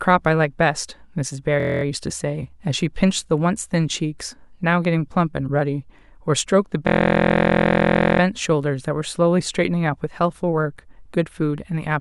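At 1.60 s and again at 6.87 s the system froze while the sound hardware kept replaying the same ring buffer: a system hang loop. Each time, one 23.2 ms slice of speech repeats exactly, which fits a 1024-sample buffer, so the voice collapses into a steady buzz at about 43 Hz. The first hang lasts until 1.83 s, the second until 8.20 s, and speech then resumes with little or none of it skipped.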